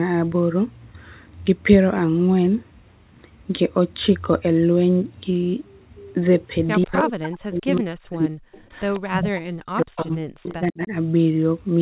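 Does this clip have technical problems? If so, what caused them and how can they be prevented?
Yes. Faint copies of the speech trail the main voice by 145 ms at 6.82–6.98, 7.73–7.79, 8.13–8.17, 8.73–9.0, 9.96–10.17 and 10.48–10.54 s, sitting about 20 to 30 dB below it. This is an echo leak, likely from the far end playing the call on a loudspeaker while its echo canceller failed to remove all of what its microphone picked up, so the remainder came back down the line. Using headsets, or a better-tuned echo canceller and lower speaker volume, prevents it.

From 6.85 to 8.6 s and again from 9.13 to 10.93 s, the talker's voice repeatedly sinks, by as much as roughly 40 dB, for around one and a half seconds in each span. This is speech suppressed in double talk: the echo canceller likely could not tell local speech from loudspeaker echo when both overlapped, so it turned both down. A canceller with full-duplex double-talk handling, or headsets that remove the echo at its source, prevents it.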